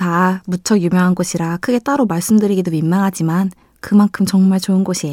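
Speech with no audible faults.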